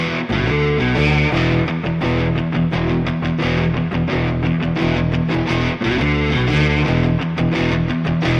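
No technical faults can be heard anywhere in the clip.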